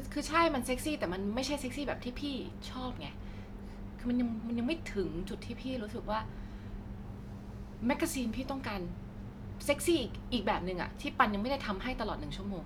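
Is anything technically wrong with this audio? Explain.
No, nothing technically wrong turns up anywhere in this speech recording, so there's nothing to flag here.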